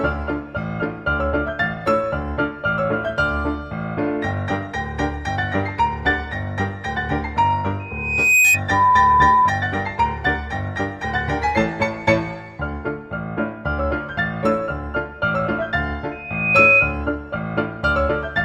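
A microphone picking up its own loudspeaker pushes the loop past unity gain at 2.5 kHz, causing loudspeaker feedback squeal from 7.79 to 8.61 s and again from 16.11 to 17.04 s. Each time, a piercing tone swells over about half a second to roughly 10 dB above the sound.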